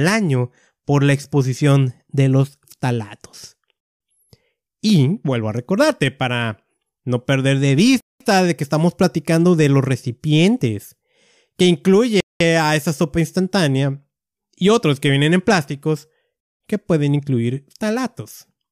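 At 3.80, 8.00, 12.20 and 16.40 s the speech drops into a 200 ms hole, a gap between chunks, first after "exposición de los talatos". The audio was likely delivered in 4-second chunks with silence left at each join, so nothing's lost, just interrupted.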